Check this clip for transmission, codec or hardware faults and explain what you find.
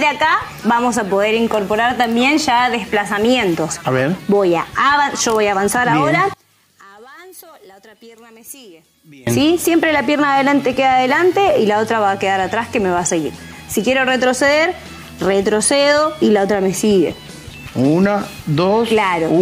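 One fault is present. From 6.34 to 9.27 s, the sound drops about 26 dB to a faint residue. The likely cause is one channel inverted, cancelling shared content in mono.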